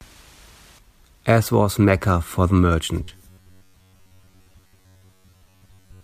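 From 3.04 s to 6.03 s, the speech turns into robotic sound from repeated short buffers. It becomes a rigid, metallic buzz pitched at 93.8 Hz. The likely cause is new audio arriving too seldom. To fill the gaps, the software keeps replaying the last slice of sound, about 10.7 ms long. Most of the real audio in that span is skipped. The fixed repeat rate stamps its own pitch over the voice.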